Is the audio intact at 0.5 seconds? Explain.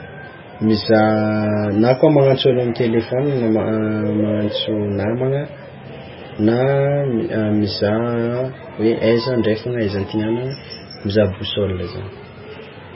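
No, MP3 compression damage runs through the whole clip, including 0.5 s: nothing above 5.5 kHz, with swirly, watery speech that likely comes from a very low bitrate, around 16 kbps.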